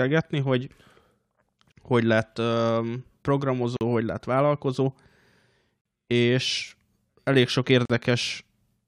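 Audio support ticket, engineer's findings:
Gap at a join of encoded pieces: 49 ms, then 43 ms silences at 1.72, 3.77, 5.81, 7.85 s, regular 2.0 s spacing. Sound resumes where it stopped. Untrimmed encoder delay and padding, not random dropout.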